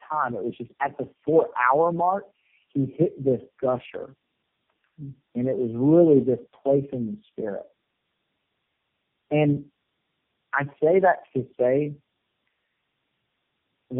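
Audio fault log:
throughout: tandem speech coding. The speech is rough, muffled and warbly, with nothing above 3.4 kHz. It was decoded and re-encoded across four low-rate speech codecs in a row, G.729A then AMR-NB three times, so each coder piled its distortion onto the previous coder's output.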